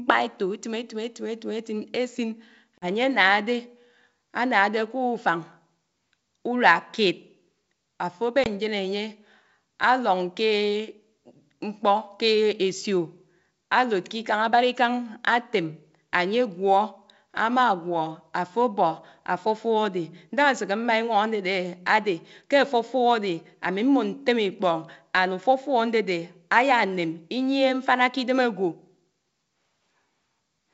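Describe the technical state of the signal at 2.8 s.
From 2.78 to 2.86 s there is packet loss on an ADPCM call. About two packets, 40 ms of speech, are replaced by silence, which shows as a flat, hard-edged gap in the waveform and a blank vertical strip on the spectrogram. Afterwards the mismatched predictor and step size leave the speech slightly distorted.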